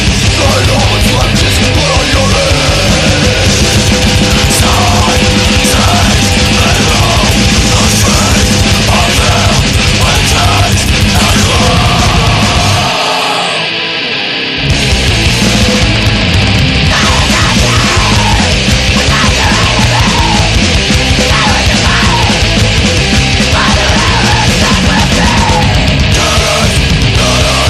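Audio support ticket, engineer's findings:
Hard clipping throughout: about 6 dB overdrive flattens peaks on around a tenth of samples; converter or other stage overloaded. Harsh high-harmonic fuzz, not soft saturation's rounded warmth.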